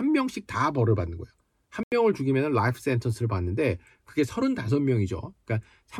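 At 1.79 s a corrupt frame is muted. The decoder rejected damaged data, so speech drops abruptly to silence until 1.92 s. The gap fits two lost frames.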